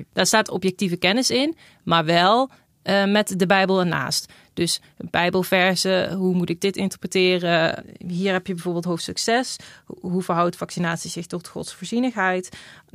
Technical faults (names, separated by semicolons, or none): none